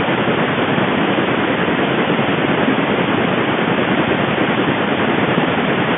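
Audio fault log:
Nothing's wrong here; the speech just sits in the narrow band of an ordinary phone line, as expected for a telephone call.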